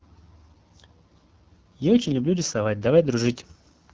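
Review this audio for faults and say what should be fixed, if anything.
The whole clip carries AMR wideband (HD Voice) codec damage. The speech sounds rough and raspy, which fits one of the lowest AMR-WB modes, near 8.85 kbit/s, where the pulse-driven vocal tract model runs short of bits. Nothing is present above 7.2 kHz. To prevent this, negotiate AMR-WB at 12.65 kbit/s or higher, or use a higher-quality codec for this path.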